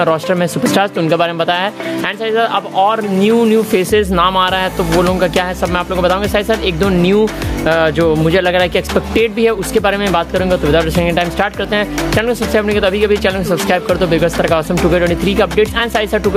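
Gain pumping runs through the whole clip. The swing is large, somewhere around 15 dB. Loud and quiet moments sit unnaturally close in level, and the sound feels squashed and breathing. The likely cause is input gain set far too high for the microphone, with a fast limiter or compressor clamping down on every peak and releasing between them.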